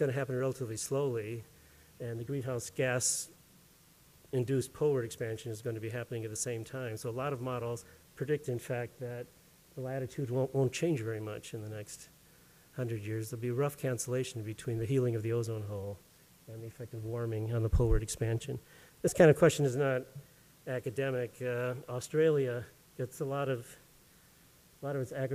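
No technical faults can be heard anywhere in the audio.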